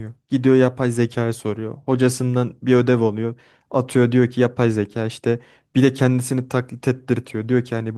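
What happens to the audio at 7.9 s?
Nothing goes wrong at 7.9 s: the speech there comes through intact, carried by the same light Opus voice compression as the rest of the clip.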